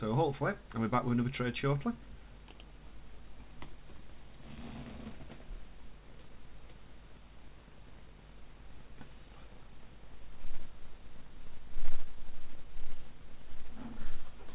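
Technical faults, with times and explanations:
No technical faults are audible; the sound carries the band limit of a narrowband call path, with nothing above 4 kHz, consistent with G.711 mu-law coding.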